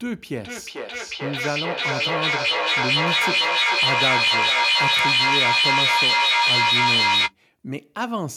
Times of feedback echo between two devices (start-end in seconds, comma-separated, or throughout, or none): 0.44-7.35